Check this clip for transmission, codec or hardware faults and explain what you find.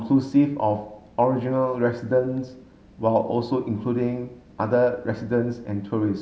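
Nothing turned up here, as the speech comes across without any transmission, codec or hardware trouble worth pointing out.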